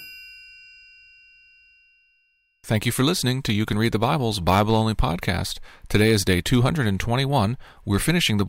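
No technical faults are audible anywhere in the speech recording.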